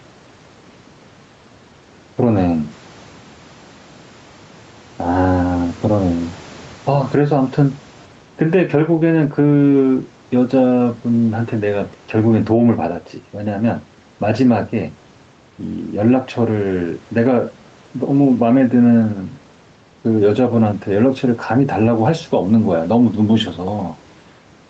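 Throughout the speech, the level pumps in a breathing swing of around 10 dB that squashes loud and soft passages together. This gain pumping likely comes from excessive microphone gain with a fast limiter catching each peak.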